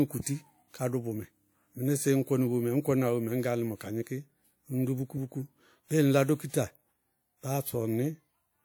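Speech, with clock slip clicks: around ten regular ticks from 0.59 s to 8.34 s, roughly 0.7 s apart. The steady spacing points to two devices likely running unlocked clocks a few tens of ppm apart, each tick a single dropped or repeated sample.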